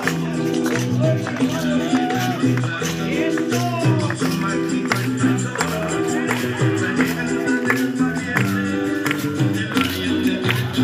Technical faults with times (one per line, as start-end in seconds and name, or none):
none